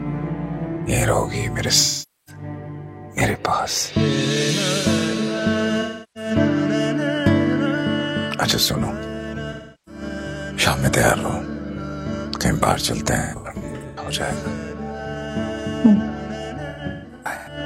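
AAC frame loss with concealment causes smeared, phasey patches at 1.80–2.42, 5.81–6.31, 9.52–10.02, 13.19–14.07 and 16.69–17.57 s, where the decoder papers over dropped frames by reusing the last good spectrum. The last two are scattered bursts, with the longest runs around 150 ms.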